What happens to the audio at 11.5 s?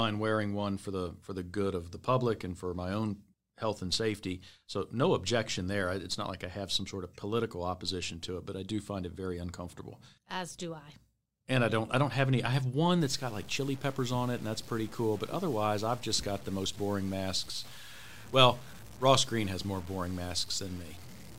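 Nothing goes wrong at 11.5 s; the speech runs through that moment intact, with no dropout, click, glitch or other fault.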